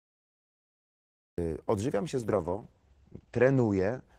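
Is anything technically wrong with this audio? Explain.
Yes, two faults. Cut-off start: digital silence until 1.38 s, then the sound begins mid-stream right before "odżywiam się", with no attack or fade, unlike a slow fade-in or a brief dropout.

Call bitrate drop: from 2.19 s, after "odżywiam się", the encoder falls from 32 to 11 kbps and bandwidth narrows from 12 kHz to 8 kHz. The sound turns muffled and watery for about 1.4 s at its worst, a continuous coarsening rather than the gaps of packet loss.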